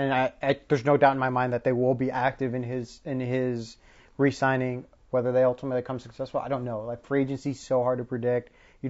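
Throughout the speech, the sound is rough and grainy, with noise filling the gaps between harmonics and a plainly damaged top band. This is likely low-delay AAC compression (AAC-ELD). Its short frames blur pitch harmonics, unlike standard AAC's pre-echo smearing, and the damage level fits a bitrate around 32 kbps.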